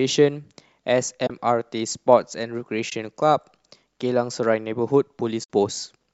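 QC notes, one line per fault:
1.27–1.30 s, 2.90–2.92 s and 5.44–5.49 s: AAC frame loss with muting. The decoder zeroed the spectrum of missing frames, leaving holes of 30, 20 and 60 ms. The overlapping windows fade the sound out and back in across each gap, so these are soft dropouts. The timing fits 10 ms frames, likely from the low-delay AAC compression in the path.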